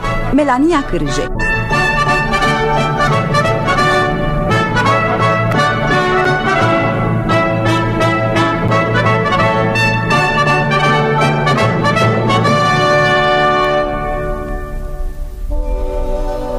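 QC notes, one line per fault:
6.25 s and 8.68 s: block of digital silence. At each spot the sound drops straight to zero for a few milliseconds, about 5.8 ms the first time (which fits a 256-sample buffer) and 6.4 ms the second, then comes straight back. With no fade in or out, the hard edges on both sides land as a single sharp tick rather than an audible hole, the classic sign of an output buffer that wasn't filled in time.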